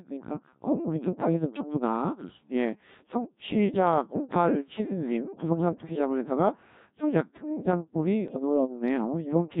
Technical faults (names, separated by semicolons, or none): Codec 2 vocoder; bit errors on digital voice radio